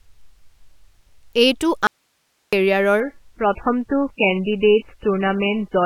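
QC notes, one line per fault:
1.87–2.53 s, audio dropout to a faint residue: the speech cuts out abruptly for about 0.66 s and the gap holds only hiss, far below the signal, roughly 50 dB down, before the sound snaps back in mid-flow. That hiss means the path after the break stayed live, and a likely cause is a momentary loss of the incoming signal upstream. Unlike a natural pause or a fade, there is no tapering at either edge, just a hard cut to the residue.
3.00–5.85 s, adaptive stream at a lower bitrate: at 3.00 s the quality drops suddenly and stays down to the end, with nothing above 3 kHz, so the speech turns dull and band-limited with heavy codec smearing. This fits an MP3 stream falling from 128 kbit/s to 8 kbit/s when the connection slowed. What separates it from a dropout is that the sound never stops; there is no gap, only an abrupt step down in bandwidth and clarity.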